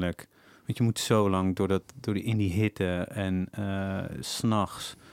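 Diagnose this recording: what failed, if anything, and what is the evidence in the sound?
No fault can be heard.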